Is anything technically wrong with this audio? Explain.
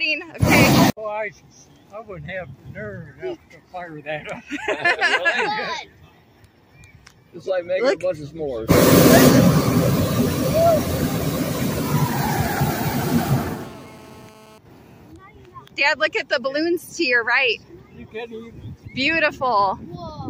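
Yes. From 12.57 s to 14.58 s there is GSM phone buzz. A 2G phone close by sends its radio signal in short bursts, about 217 times a second. The audio circuitry picks up those pulses and rectifies them into sound. The result is a harsh, raspy buzz at 217 Hz, rich in harmonics and unrelated to the audio itself. It holds steady for those two seconds, as a phone on a call does. It sits about 25 dB below the signal.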